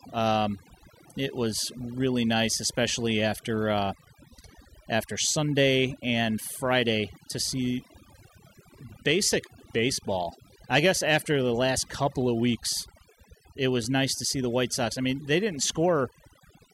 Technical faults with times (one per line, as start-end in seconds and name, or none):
0.00-16.74 overdone noise removal